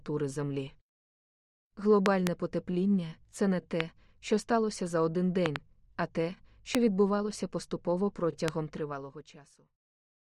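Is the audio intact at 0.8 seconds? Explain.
Yes, the audio is intact at 0.8 seconds, with no dropout, click, distortion or other fault to be heard at that point.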